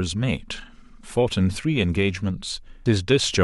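Compressed frames skipped at 2.86 s: the speech abruptly jumps forward, losing about half a second of material in a single instant. A run of whole compressed frames never reached the output, either missing from the stream or rejected by the decoder as corrupt, so playback resumes further along. The gap fits roughly seven frames of about 93 ms each.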